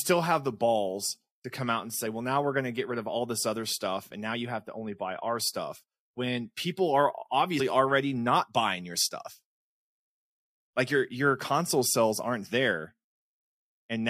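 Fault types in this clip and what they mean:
Compressed frames skipped: the speech lurches forward at 2.05 s, dropping about 50 ms, and again at 7.59 s, dropping about 150 ms, each join a brief blip or click. Whole coded frames there were missing or rejected by the decoder.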